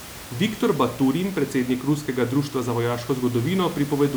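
Nothing stood out on listening to this speech, with only the room's own background noise audible, sitting about 17 dB below the voice.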